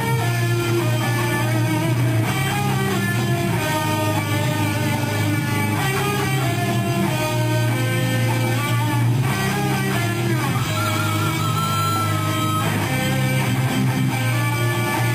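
No technical faults can be heard anywhere in the recording. Nothing in the sound points to a problem in how it was captured, processed or delivered.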